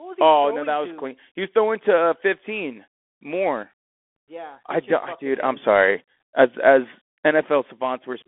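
Bluetooth CVSD headset codec damage runs throughout the speech. The band is confined to roughly 250 Hz to 3.4 kHz, with nothing above 3.8 kHz, which fits a 64 kbps CVSD stream. Each sample is coded as a single up-or-down bit with an adapting step size, so loud high-frequency sounds outrun the step and distort. The codec damage is plainly audible: s sounds turn scratchy, and a granular hiss sits beneath the speech.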